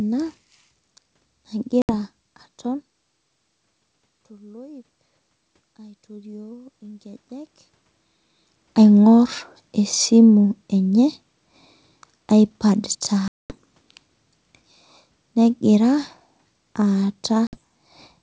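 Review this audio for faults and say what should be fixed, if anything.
Packet loss on an ADPCM call occurs at 1.82 to 1.91 s, 13.28 to 13.55 s and 17.47 to 17.57 s. Gaps of about 70, 220 and 60 ms drop abruptly to silence, suggesting roughly seven, twenty and seven lost packets. Afterwards the decoder's predictor and step size no longer match the sender's, so the sound comes back slightly distorted for a short while. Jitter buffering with packet loss concealment and decoder state resets would prevent this.

Automatic gain rising runs from 5.77 to 7.59 s. After the input level fell by about 22 dB, the gain control slowly added about 7 dB, so the speech and the room noise swell together over nearly two seconds. Faster attack settings or a fixed gain would avoid the audible ramp.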